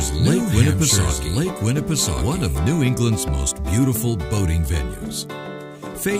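From the start until 3.28 s, a doubled audio track runs: an equally loud copy trails about a second behind, likely a second capture path, then stops abruptly, with identical spectrogram patterns offset horizontally.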